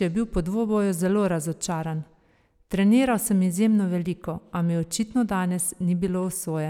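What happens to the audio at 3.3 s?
Nothing goes wrong at 3.3 s: the speech carries straight through that point with no dropout, click, glitch or other audible fault.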